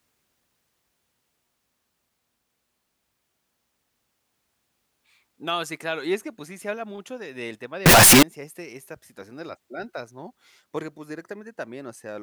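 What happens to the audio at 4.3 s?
Nothing goes wrong at 4.3 s: the speech there plays through cleanly, with no dropout, click, distortion or other audible fault.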